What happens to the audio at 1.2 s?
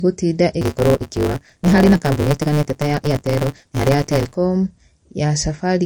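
At 1.2 s the speech sits inside a block size mismatch (truncated) fault that runs from 0.61 s to 4.36 s. One stage writes blocks longer than the next stage reads, which fits a 512-sample block, and the unread tail of each block is discarded. The result is a steady buzz at 150 Hz, the rate at which blocks are chopped, and the speech runs 1.6 times faster than normal while keeping roughly its usual pitch.

Across the whole clip, including this moment, the sound also carries plainly audible MP3 compression damage, likely from a low-bitrate encode around 40 kbps. Weak frequency components flicker in and out from frame to frame, giving a watery, swirling texture with metallic chirps on s sounds and softened, smeared attacks.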